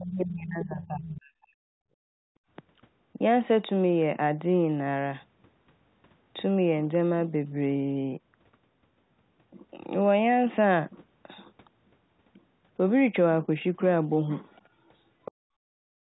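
Speech suppressed in double talk runs from 0.00 to 1.58 s, and again from 16.08 s to the end. The speech dips and breaks up, falling by around 40 dB at worst. The likely cause is the echo canceller mistaking overlapping far-end and near-end talk for echo and turning both down.

The other side's voice leaking through shows up as brief scraps of a second voice at 0.84 s and 1.04 s, again from 14.53 to 14.67 s, and from 15.25 to 15.32 s. They sit roughly 15 to 35 dB below the main speech. Most likely the canceller left loudspeaker sound in the microphone signal.

Background gated by the echo canceller occurs from 1.86 to 2.48 s and from 15.32 to 15.80 s. The room tone drops by about 34 dB and then returns. The canceller clamped the microphone while the loudspeaker played and released it afterwards.

Packet loss with the last packet repeated appears at 6.24 s as a 20 ms gap. The receiver refilled it by replaying the previous audio, which fits a single lost 20 ms packet and produces a small blip.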